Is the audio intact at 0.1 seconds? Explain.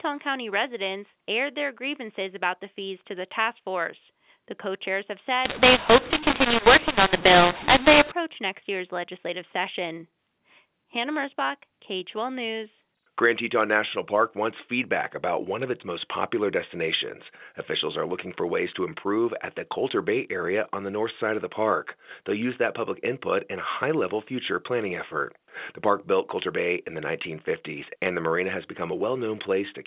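Yes, the speech at 0.1 seconds is intact, with only the normal narrowband sound of G.711 A-law telephone coding, which carries nothing above 4 kHz.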